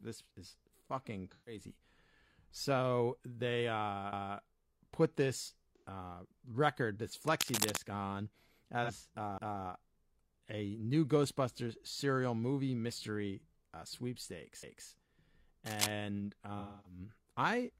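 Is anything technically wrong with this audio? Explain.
Yes. The speech has three kinds of fault.

AAC frame loss with concealment occurs four times: 1.31 to 1.61 s, 5.77 to 5.86 s, 8.83 to 8.90 s, and 16.59 to 16.99 s. The decoder is missing about 128, 85, 43 and 256 ms of audio. That fits whole lost frames of about 43 ms each. It rebuilds the gap from the last good spectrum. The short gaps, such as the one between "they uh put this" and "uh record this", sound smeared and phasey. The last gap is the longest.

Overlapping chunks appear at 4.13 to 4.38 s, 9.38 to 9.63 s, and 14.63 to 14.88 s. The joins come about every 5.25 s, which points to 5-second processing chunks. Each new chunk starts about 250 ms before the previous one ends, so that quarter-second plays twice. The first is between "they uh" and "put this uh record". Each is heard as a click or stutter at the join.

Cable scratch noise runs from 7.27 to 7.78 s, just after "this uh record this", and again from 15.65 to 15.93 s. 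Dense, uneven crackle and rustle sit over the speech at about the same loudness as the voice. The likely cause is a worn cable, connector or control being moved. Its contact resistance changes rapidly, and that turns into bursts of scratchy noise.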